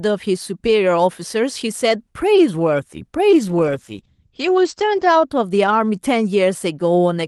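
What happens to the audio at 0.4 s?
Nothing goes wrong at 0.4 s: the speech there is intact, carried through the WebRTC call path with only the ordinary coding of the Opus codec.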